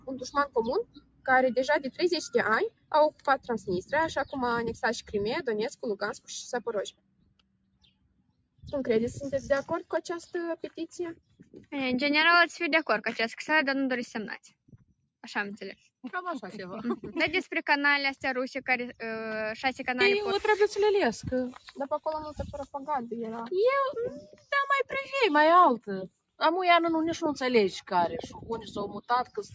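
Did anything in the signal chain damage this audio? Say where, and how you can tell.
Yes. The damage happens at the call-processing stage, where a noise suppressor built for speech was left on the path. All the way through, the level swings by around 10 dB as the suppressor reacts to what is steady in the sound. Sudden onsets pass, while sustained parts and tails get pulled down, so the sound pumps and thins. A compressor reacts to loudness, but this reacts to steadiness, which is why loud held material still sinks. The call's band-limiting, with nothing above 8 kHz, is normal.

The same suppressor also cuts specific passages harder than the rest, treating them as noise. This happens at 0.83–1.26 s, 2.70–2.91 s, 3.11–3.67 s, 6.91–8.66 s (the longest), 11.15–11.72 s, 14.46–15.09 s and 24.32–24.51 s. The deepest drops reach about 19 dB, and the last is shallowest at about 10 dB. Unlike network dropouts, the sound sinks rather than vanishing, and attacks survive while decays are cut short.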